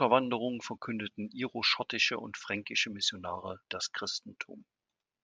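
Nothing here trips the ear: no technical faults turn up anywhere in the recording.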